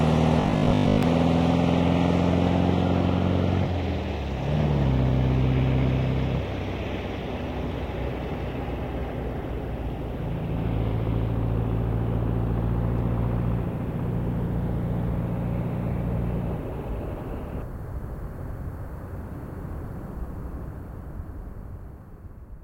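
Robotic sound from repeated short buffers, 0.41 to 1.03 s: the audio turns into a rigid 50 Hz buzz for most of that stretch. The likely cause is audio arriving too seldom, so a 20 ms slice is looped while the real sound is skipped.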